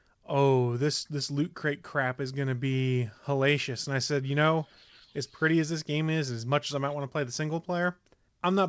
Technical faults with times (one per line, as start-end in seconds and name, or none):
none